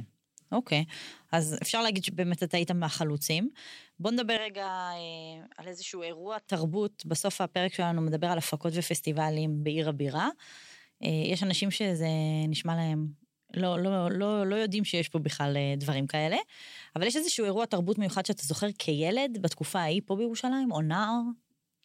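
Input switched to a poorer device from 4.37 to 6.48 s, likely another microphone: the speech loses everything above 7.8 kHz, drops about 10 dB, and gains faint background noise.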